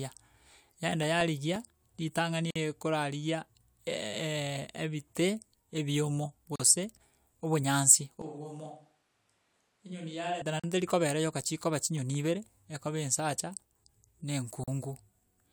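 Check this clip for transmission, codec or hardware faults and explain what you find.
Three kinds of fault are present in this speech clip: CD scratch ticks, gaps at joins of encoded pieces, and a switch to a distant microphone.

CD scratch ticks occur between 1.03 and 2.08 s (seven ticks) and again between 11.27 and 12.50 s (eight ticks). The longest tick is only a few milliseconds. A blemish on the disc defeats error correction once per revolution, so the player patches or mutes the damaged samples, giving about six or seven evenly spaced ticks a second. Unlike random codec clicks, they keep a steady rotational rhythm that swells and fades.

Gaps at joins of encoded pieces fall at 2.51 s (51 ms), then at 6.56, 10.60 and 14.64 s (about 40 ms each), exactly every 4 s. Separately encoded pieces were joined with their start-up delay and end-of-frame padding still in place. The result is short holes with slightly smeared edges, and the sound resumes exactly where it stopped. 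A transmission dropout would lose material, and it would not recur on such a strict schedule.

From 8.22 to 10.42 s the speech suddenly turns roomy and hollow, with thinner bass. The level drops by about 10 dB, and room noise rises to about 35 dB below the speech. This is likely a switch to a distant microphone after the close one failed. A simple gain dip would only make the sound quieter, without the abrupt change in tone and room character at both edges.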